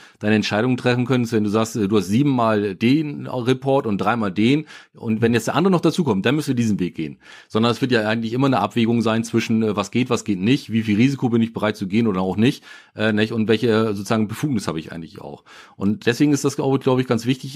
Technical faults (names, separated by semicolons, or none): none